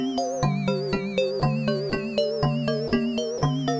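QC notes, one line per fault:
1.40, 1.90, 2.88–2.92, 3.38–3.42 s, sound dropped by the voice detector: four brief gaps, 20 ms at the first two and 40 ms at the last two, where the sound gives way to a short patch of steady, featureless noise, likely comfort noise inserted after the sender's detector mistook the sound for background. The fill is flat hiss rather than a smeared repeat or a click-edged silence, which separates it from packet-loss concealment. Nothing reaches above 8 kHz, consistent with a wideband call codec.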